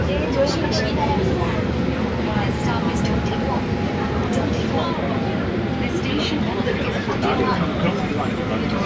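Everyday sounds, with no technical faults heard anywhere.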